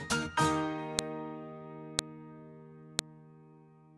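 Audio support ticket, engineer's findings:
Abrupt click at 0.99 s, 1.99 s and 2.99 s, evenly spaced 1.0 s apart and unrelated to the surrounding audio. Fault: file header played as audio. Probable component: the stage that joins or streams WAV chunks. Each 1.0 s piece keeps its header, and those few dozen header bytes are decoded as samples at every chunk boundary. Fix: strip headers before concatenation.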